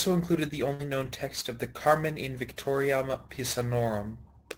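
Sample clock jitter runs through the whole of this speech recording. The converter's clock wanders by something like 10 µs, so samples land slightly off time, leaving a grainy hiss roughly 20 dB below the signal that thickens on loud, bright sounds and drops away in pauses. A burst of packet loss hits from 0.73 to 0.82 s. The receiver stretched the last sound for about 56 ms, fading it into a held buzz or hiss, and playback then jumps ahead, so about 60 ms of speech is gone.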